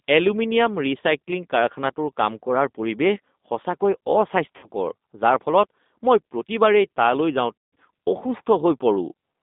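Throughout, the speech carries G.729 codec coding at a rate that fits 8 kbit/s. The line is held to roughly 200 Hz to 3.7 kHz, so sibilants lose their top and the low end thins. Voiced sounds come out slightly rough and synthetic, because each frame is rebuilt from a vocal tract filter and a few pulses rather than the waveform itself. That model-built buzz is what sets it apart from plain band-limiting.

At 4.57 to 4.69 s, VoIP packet loss concealed by the speech codec covers about 60 ms of missing audio. The decoder stretches its last pitch and filter into a short fading sound, a buzzy tone or a coloured noise. At 7.58 to 7.74 s, a longer gap of about 160 ms is bridged the same way, and the sound decays further before speech returns weak. Unlike a dropout, there is no silence or click, only a smeared, held sound.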